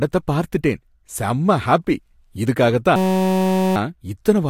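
From 2.96 to 3.76 s, after "பார்த்துட்டேன் செம்ம ஹாப்பி இதுக்காக", a system hang loop replays one 5.33 ms slice, fitting a 256-sample buffer, while the system stalls, giving a steady 188 Hz buzz. The waveform shows one identical repeating cell, and the spectrogram shows flat harmonic bands spaced 188 Hz apart.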